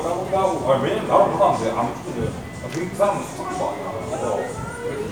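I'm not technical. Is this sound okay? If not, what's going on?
Yes, this sound is okay; there's nothing going on with it that needs fixing.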